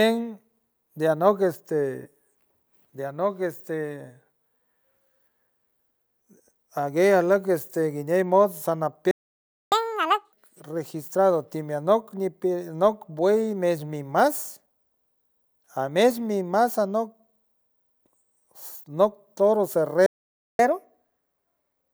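Speech recording with two playback stalls, each followed by catch-up at higher speed. At 9.11 s the audio cuts to silence for 0.61 s, resuming at 9.72 s. At 20.06 s it drops out again for 0.53 s, returning at 20.59 s. In both cases the sound halts mid-flow rather than fading, which is the behaviour of a player that has likely run dry of buffered data or had its output thread blocked.

Each gap is followed by the player resampling its backlog to recover lost time. From 9.72 s to 10.33 s the speech runs at 2.0 times normal speed with pitch raised by roughly 10 semitones, before returning to normal rate. After the second stall the correction is gentler: 1.15 times speed, about 2 semitones sharp, lasting from 20.59 s to the end of the clip.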